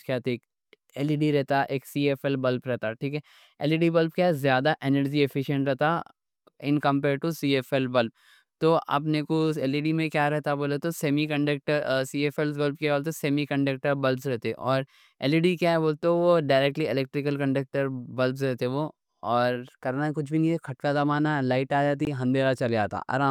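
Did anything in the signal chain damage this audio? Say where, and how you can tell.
Yes, at the driver or buffer stage: one output block was not filled in time and went out as zeros, a block of digital silence. At 22.05 s, just after "نہیں کھٹکا دبانا لائٹ", the speech drops straight to silence for about 19 ms and returns with no fade. Being longer than about 15 ms, it comes across as a short hole rather than just a tick, which fits one missed buffer period.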